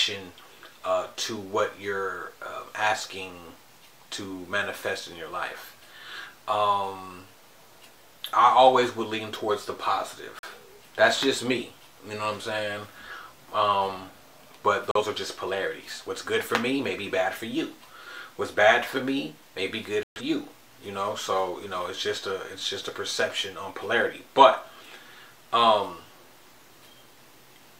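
Digital broadcast dropouts at 10.39 to 10.48 s, 14.91 to 15.01 s and 20.03 to 20.21 s: the receiver muted on frames it couldn't decode, so the sound vanishes and resumes further on. The short holes each fit one lost frame of about 43 ms, the last about three frames.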